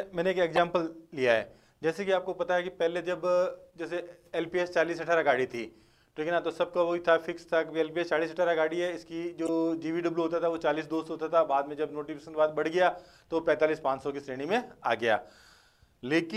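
The audio has two short bursts of damaged data in a compressed stream. The first runs from 0.56 to 0.58 s, the second from 9.46 to 9.49 s. Each lasts about 30 ms and sounds like a brief chirp, squawk, click or short hole. Part of the compressed data is corrupt at those points. The decoder misreads the affected frames and loses sync. It then hunts for the next valid frame header, and normal sound resumes once it finds one.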